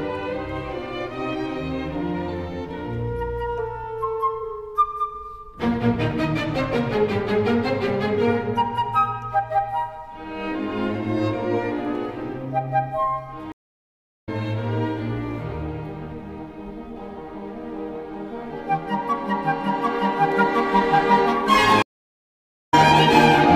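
Two stream reconnect dropouts here. The audio goes silent at 13.52 s for 0.70 s and at 21.82 s for 0.85 s, then picks up about 0.7 s further on each time. The connection broke, the player reconnected and a fresh decoder joined the stream mid-flow.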